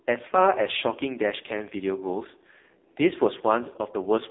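Speech runs the whole way through AMR narrowband mobile codec damage: heavy buzzy, synthetic coding that points to a low AMR-NB mode near 5.15 kbps, with the band held to roughly 300 Hz to 3.7 kHz. A spectrogram shows a hard ceiling near 3.8 kHz, empty above, and thin energy below 300 Hz.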